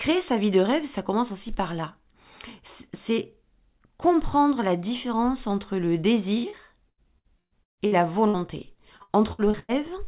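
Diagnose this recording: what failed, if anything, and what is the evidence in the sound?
Network stage, repeated packet loss. Right after "la différence entre le", from 6.38 to 8.37 s and again from 8.97 to 9.72 s, the sound goes choppy and robotic: eight, then five short holes (longest 145 ms) papered over by stretching the last sound, about a third of each stretch concealed.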